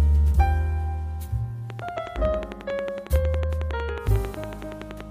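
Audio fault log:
1.70–5.02 s: train of clicks. A regular ticking starts and runs almost to the end, about 11 clicks a second and roughly forty in all. Each click has much the same sharp shape. The peaks sit about 10 dB above the surrounding sound, so they cut through it and stay audible in quieter gaps. The steady spacing points to a repeating pulse source, likely electrical interference from nearby equipment or a faulty connection or power supply.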